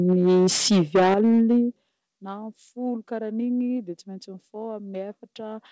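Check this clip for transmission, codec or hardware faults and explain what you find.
Two hardware-side faults are audible in this speech clip, both in the first couple of seconds, heard through a call path whose band stops at 8 kHz.

Microphone overload, 0.08 to 1.59 s: the loudest syllables have a harsh, crackling edge, with roughly a fifth of samples flattened. The signal drove about 14 dB past full scale, so the converter sliced off waveform peaks, most likely from an input level set far too high.

Microphone volume stepped down, at 0.13, 1.14 and 2.16 s: voice and background drop abruptly by about 2, 9 and 10 dB, the first two arriving amid the distorted stretch. This is likely the call software cutting the device's input gain in single steps after detecting clipping.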